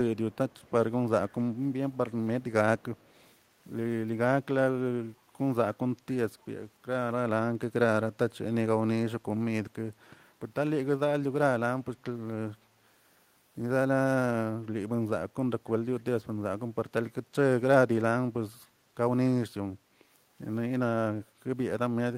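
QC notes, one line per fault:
0.31–0.71 s, 1.29–1.42 s, 1.92–1.97 s, 2.78–3.33 s, echo leak: a faint delayed copy of the speech trails it by 270 ms, very low at around 35 dB beneath. The likely cause is a far-end loudspeaker whose echo canceller let residual pickup return down the line.
21.27–21.4 s, background gated by the echo canceller: the room tone dips by about 6 dB for roughly 150 ms and then recovers. The canceller clamped the microphone gain while its loudspeaker was playing and released once playback ended.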